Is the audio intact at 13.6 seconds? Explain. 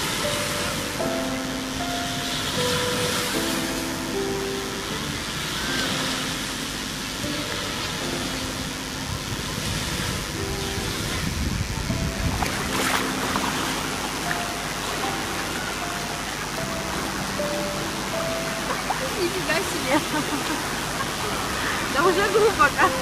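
No. At 13.6 s a mains buzz is present, as it is throughout the whole clip. Sharp switching spikes, leaking in from something like a dimmer or rectifier, arrive twice per 50 Hz cycle, giving a steady, raspy buzz roughly 10 dB below the sound itself. A spectrogram shows evenly spaced horizontal lines at multiples of 50 Hz reaching several kHz. The waveform carries regular spikes every 10 ms.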